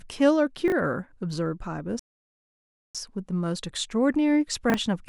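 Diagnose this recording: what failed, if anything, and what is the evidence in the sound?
Chunks out of order, at the network or buffer stage: at 0.68–0.72 s and 4.70–4.74 s, a 20 ms chunk plays one slot late, giving a jumbled moment. Unlike dropouts, nothing goes missing.

Rebuffering stall at playback: silence from 1.99 to 2.95 s adds about 0.95 s, then the speech resumes exactly where it stopped. Unlike a packet loss, no audio is skipped.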